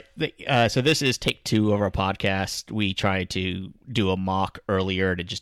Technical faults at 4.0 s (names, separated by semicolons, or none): hard clipping